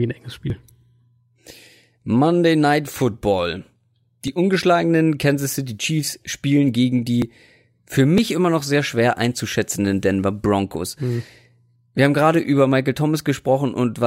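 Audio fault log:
0.50, 4.28, 7.22 and 8.18 s: dropped buffer (overrun). Each is an abrupt skip ahead with no gap: about 20 ms gone after "ein enges", about 10 ms elsewhere, including after "spielen gegen" and before "immer noch sehr schwer". Likely, samples were overwritten unread, so the two sides join directly.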